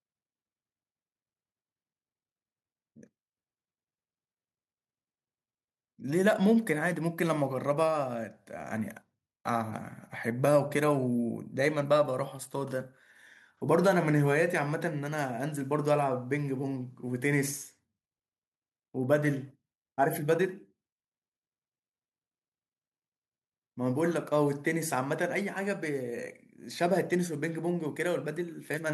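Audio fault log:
No faults detected anywhere in the speech; nothing to log.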